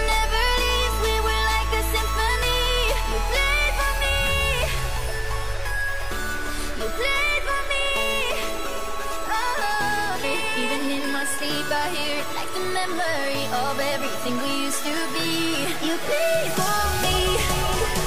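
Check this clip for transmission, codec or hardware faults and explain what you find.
One transmission fault is present. At 10.23 s the audio jumps abruptly forward, with a short blip at the join and a discontinuity where the material before and after does not connect. This is most likely a stream segment skipped: in segmented delivery, one chunk failed to arrive or decode, and the player moved on to the following segment instead of stalling. The missing segment's content is simply absent, so the sound cuts from one point to a later one.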